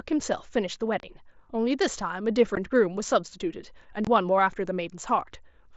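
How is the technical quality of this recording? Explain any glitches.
Three brief holes break up the speech, each a gap with hard edges that can click as the sound cuts out and returns. They fall at 1.00 to 1.03 s (30 ms), at 2.55 s (15 ms) and at 4.05 to 4.07 s (22.5 ms). This is unconcealed Bluetooth headset packet loss. Voice packets travelling between headset and phone went missing, and nothing was synthesised to bridge them, so silence or an idle pattern fills the space. The gap lengths fit runs of 7.5 ms packets on the mSBC wideband link that carries this audio.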